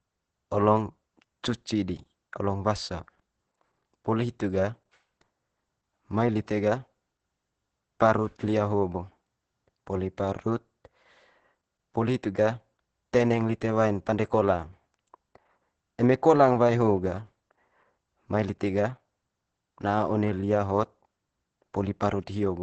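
Throughout, Opus voice compression: the SILK coder at what sounds like about 10 kbps cuts everything above 8.6 kHz, leaving the speech muffled, hoarse and slightly robotic.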